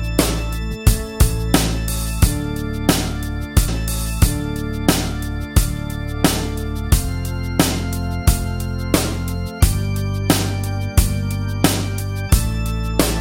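At 3.67 s a stream segment is repeated: the player queued the same segment twice, so about 2.0 s of audio, running to 5.67 s, plays again. A small blip marks the jump back before the passage repeats and the clip continues.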